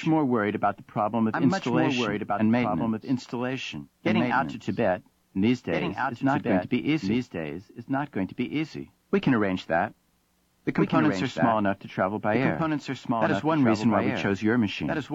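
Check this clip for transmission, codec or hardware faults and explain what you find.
One fault runs through the whole clip. A doubled audio track is present throughout: a second, complete copy of the sound trails the original by roughly one and a half seconds, sitting around 5 dB quieter. The likely cause is the same signal reaching the mix twice, once directly and once through a slower capture path or misaligned edit. Because the copy is full-band with no decay or room colour, it reads as a distinct, clean repeat rather than reverberation.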